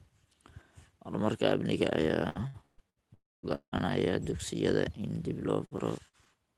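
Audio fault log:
2.29–2.99 s, repeated packet loss (robotic sound): packets failed to arrive four times in quick succession, losing about 0.3 s of audio in total, the longest gap about 0.12 s. The receiver patched each hole by extending the last sound it had, so about 44% of this stretch is filler. The sound turns choppy, with pieces dropping out between the patches.
3.14–3.46 s and 3.55–3.75 s, long network dropout: the sound carries on as a smeared buzz that fades, then goes silent for about 0.21 s in the first span and about 0.09 s in the second. It resumes with about 0.3 s and 0.18 s of material simply gone, the second return landing on "dugsiyada in dib". The likely cause is that nothing reached the receiver during these spans. It stretched the last sound until it gave up, which leaves the hollow stop-and-restart effect.
5.65–6.29 s, repeated packet loss (robotic sound): right after "dugsiyada in dib", four more short gaps lose about 0.12 s, none longer than about 0.06 s. 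About 20% of the stretch is patched sound, which gives a lighter stutter.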